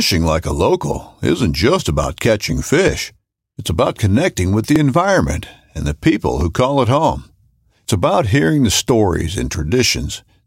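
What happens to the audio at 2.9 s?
Dropped buffer (overrun) at 2.88 s: a small jump in the speech, likely because roughly 10 ms of samples were overwritten before being read.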